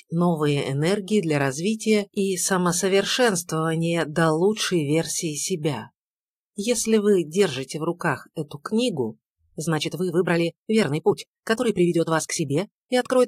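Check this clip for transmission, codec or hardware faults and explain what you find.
One fault turns up, right at the end. From 9.64 s to the close at 13.28 s there's a time-stretched section: the pace jumps to about 1.5 times faster while the pitch stays put, so it comes across rushed. That's likely software squeezing the audio to fit a length, dropping short slices to hold pitch steady.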